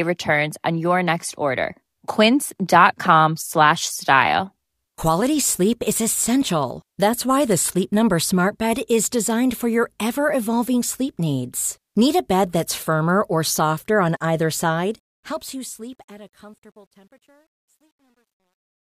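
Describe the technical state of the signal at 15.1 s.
At 15.1 s the fade-out is under truncation distortion, running from 14.68 s, just after "or softer on either", to 18.84 s. The fading level is requantized without dither, which fits an 11-bit word length, so the waveform stair-steps into grit, worsening from 16.27 s.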